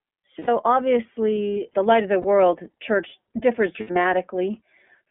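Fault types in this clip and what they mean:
iLBC codec: the whole speech clip runs through a narrowband VoIP codec, with nothing above about 3.4 kHz and a thin low end. Each 30 ms frame is coded on its own, and at this setting the damage is plainly audible as a rough, slightly synthetic edge, which fits a 13.33 kbps mode.
Lost iLBC frames: when packets drop, the decoder fills the hole by repeating the last pitch cycle with some noise mixed in, so you hear a brief held, buzzy vowel. Gaps fall at 0.39 s before "obviously the light of", 2.22 s between "the light of the" and "church differs", and around 3.8 to 4.05 s after "church differs".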